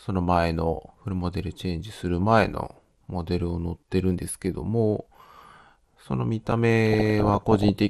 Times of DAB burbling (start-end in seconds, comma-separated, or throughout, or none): 6.86-7.69